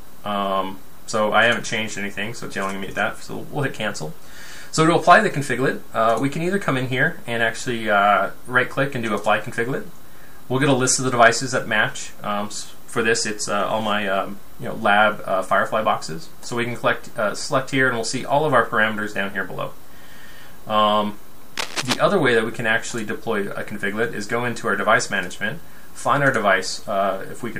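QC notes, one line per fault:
21.56–22.02 s, cable scratch noise: a dense, irregular burst of scratching and rustling sits over the sound for a little under half a second, loud enough to be only about 5 dB below the programme itself. The uneven, crackling texture points to contact resistance changing rapidly as a part is disturbed, most likely a worn cable or connector being moved, with each fluctuation in contact turning directly into a small noise spike.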